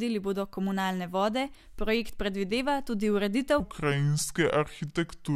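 From 3.60 s to the end, after "vode projekt predvideva tudi", a section at the wrong speed plays at 0.72x, likely from a clock mismatch, so the speech turns slow and about five semitones deeper. On a spectrogram, harmonics drop lower and syllables stretch wider.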